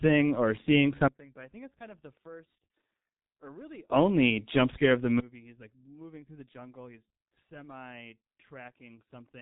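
G.723.1 codec damage runs through the whole clip. The speech has no content above about 3.8 kHz, so it sounds muffled, and the voicing has a hoarse, buzzy edge. The codec works in 30 ms frames and updates its voice model slowly, so fast consonants smear into their neighbours. The damage is heavy, which fits a very low rate of around 6.3 kbit/s.

A sudden gain jump comes at 5.2 s, right after "jump scare of the". The level falls by about 24 dB in one step and stays down to the end of the clip. The speech and the background noise drop together, with no fade between the two levels. The likely cause is a digital gain setting or bit shift applied instantly, without a ramp.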